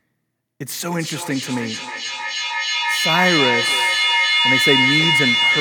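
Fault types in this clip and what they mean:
Feedback howl: a looped echo that grows rather than fades, repeating roughly every 300 ms and narrowing to a tone around 2 kHz, peaking about 3 dB above the speech.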